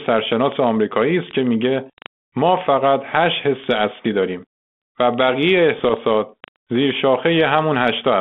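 From 5.78 to 5.94 s there's a burst of bit errors on the ADPCM link, around a third of a percent. Each flipped bit knocks the decoder's step size and predictor off, so you hear rough pops and quick level jumps over the band-limited G.726 sound.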